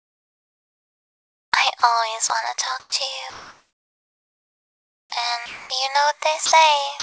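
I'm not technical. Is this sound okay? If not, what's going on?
No. Several short gaps suggest the call's silence detector is misjudging the sound.

Sound dropped by the voice detector: brief pieces of sound vanish into a soft hiss at 1.80 s, 2.28 s, 2.80 to 2.92 s, 5.46 to 5.70 s, 6.46 to 6.52 s and 7.00 to 7.03 s. The sender likely mistook real sound for background. Unlike a connection dropout, these gaps are filled with smooth noise rather than clicks or silence.

Comfort noise in place of the background: from 3.30 to 5.12 s, the natural background is likely swapped for a steady, detail-free hiss at the same loudness. It sounds flat rather than missing.

Onset clipped by the voice detector: at 5.07 to 5.12 s, the returning sound likely starts late and abruptly, its beginning lost. Unlike a dropped piece, the gap comes exactly where the sound begins.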